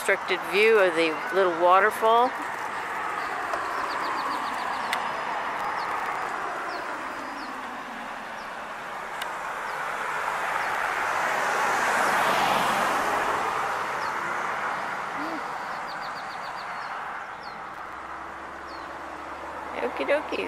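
Three bursts of gritty, tearing crackle ride on the audio, at 5.57–6.43 s, 10.70–11.02 s and 17.69–17.93 s. This is processor overload crackle: buffers of a few milliseconds miss their deadlines in a row and drop to silence, leaving dozens of hard-edged gaps.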